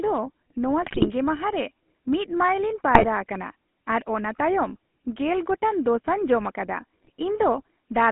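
Throughout, the speech passes through the GSM full-rate codec, which fits the 13 kbps first-generation coder. It rebuilds the voice from a vocal-tract model driven by a sparse, regularly spaced pulse train, and the line is limited to roughly 200 Hz to 3.4 kHz. The damage is plainly audible: a buzzy, gravelly roughness over every voiced sound, with the top end gone and the bottom thinned.

GSM bit errors then corrupt the decoder's filter, pitch and gain values in three bursts, at 0.82–1.10 s, 2.94–3.07 s and 7.03–7.10 s. Each bad frame bends the spectrum or throws the level, so the voice breaks into squawks, pops and gargling. The first burst is the longest and most broken, consistent with a dozen or more hit frames and an error rate of a few percent. The later two are shorter blips.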